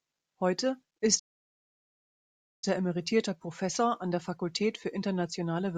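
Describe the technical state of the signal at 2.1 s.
At 2.1 s you're sitting right in the middle of a playback stall: the speech cuts off dead at 1.19 s and the output stays silent until 2.64 s, a gap of about 1.43 s. It sounds like the player likely ran dry of data or had its thread blocked, so nothing reached the output until it caught up. Speech then picks up again with "er emeritierter".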